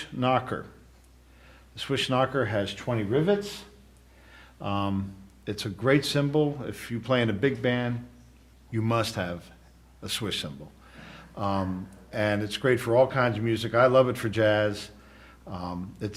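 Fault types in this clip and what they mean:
There are no fault types in this clip, so there is nothing whose meaning needs explaining.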